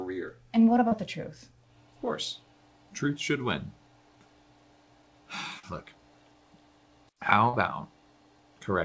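Short concealed packet loss at 0.88, 5.59 and 7.49 s: each time about 40 ms of the call arrived too late, and the receiver extended the preceding sound for 33 to 42 ms before blending back, leaving a brief smear or wobble over audio band-limited at 8 kHz.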